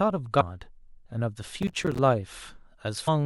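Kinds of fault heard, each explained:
Damaged data in a compressed stream: corrupted bytes throw the decoder off sync while it hunts for the next frame, giving quick blips at 0.40–0.42 s and 3.07 s.
Processor overload crackle: the processor keeps missing its buffer deadlines, leaving tiny silent gaps, so the speech tears gritty from 1.63 to 1.99 s, which fits buffers of about 5 ms, around fifteen missed.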